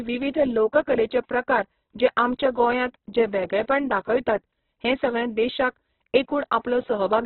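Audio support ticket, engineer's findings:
Throughout: speech grainy and rough, hard ceiling at 4.1 kHz on spectrogram, noise-textured bands. Likely Opus compression, CELT mode, heavy damage fitting roughly 8 kbps.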